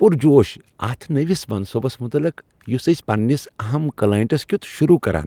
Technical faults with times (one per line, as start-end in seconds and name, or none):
none